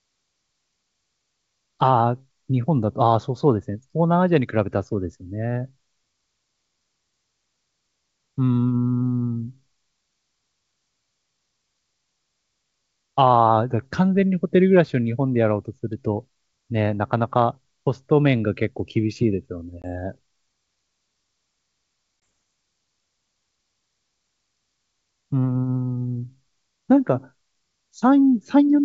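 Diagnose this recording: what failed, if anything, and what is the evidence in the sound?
Two hard-edged silent holes, at 19.82 to 19.86 s and 22.20 to 22.22 s, each followed by slightly distorted speech that settles shortly after. This is network-stage packet loss on the ADPCM call: about one 20 ms packet each time, knocking the G.722 decoder's predictor and step size briefly out of step.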